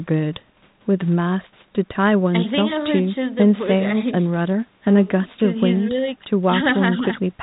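The speech clip has no technical faults: no dropouts, clipping, glitches or other defects can be heard in it.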